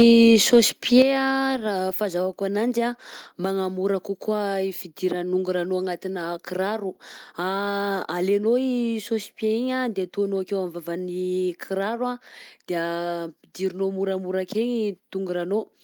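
Right from the start, 0.0 to 0.59 s, the loudest speech peaks are flattened and crackly. That's microphone overload, likely an input set too hot, pushing peaks about 3 dB past the converter's ceiling and squaring off a small share of samples. At 0.02 s there's a sudden drop of about 3 dB in both speech and background, a microphone volume stepped down event, likely the call software reacting to that clipping by cutting input gain in one step. It happens again a moment later. From 0.96 to 1.02 s another burst of overload adds a harsh edge, with peaks about 1 dB over and a few percent of samples clipped. Right on its heels, at 1.02 s, the level steps down again, this time by about 7 dB, so everything suddenly drops in level.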